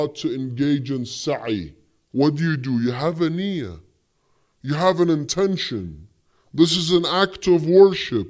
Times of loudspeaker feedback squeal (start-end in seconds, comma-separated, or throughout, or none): none